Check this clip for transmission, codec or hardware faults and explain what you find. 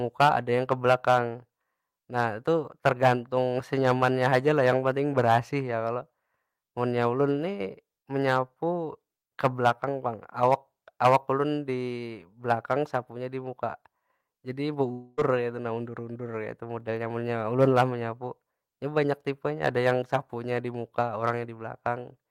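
One fault turns up in this speech. From 14.91 to 15.19 s there is a long network dropout: packets likely stopped arriving, so the receiver filled the 260 ms gap with a fading buzz, and that speech is lost.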